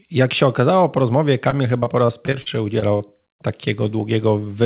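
Right after "się okazało po rozmowie", from 1.5 to 3.02 s, the speech turns choppy and robotic with repeated packet loss: nine short holes, the longest 41 ms, each patched by stretching the previous sound, about 13% of that span. Unlike a single dropout, the gaps recur again and again, over narrowband audio with nothing above 4 kHz.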